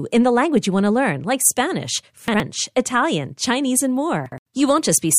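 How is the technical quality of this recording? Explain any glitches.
The speech has two brief playback-order glitches. Chunks out of order occur from 2.28 to 2.40 s and from 4.26 to 4.38 s. In each, a 60 ms chunk plays one chunk late, swapping with its neighbour. Nothing is lost, but the reordering creates three hard joins and a momentary jumbled, garbled sound.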